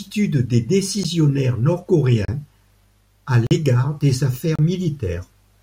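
Blocks of digital silence hit the speech at 1.04 s (about 11 ms), 2.25–2.28 s (32 ms), 3.47–3.51 s (43 ms) and 4.56–4.59 s (32 ms). Each time the output buffer likely went unfilled and was zeroed, leaving a hole, shortest a tick, which fits a 512-sample buffer.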